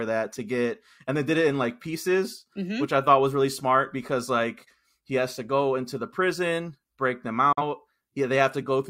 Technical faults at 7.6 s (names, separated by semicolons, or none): digital broadcast dropout